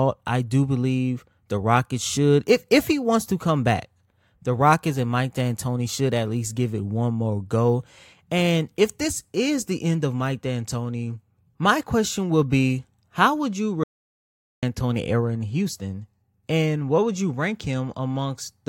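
At 13.84 s, just after "would you", the speech drops out to silence. It returns at 14.63 s on "era in". The gap is dead silence with no room tone. About 0.79 s is lost. The input was likely cut off while silence was written.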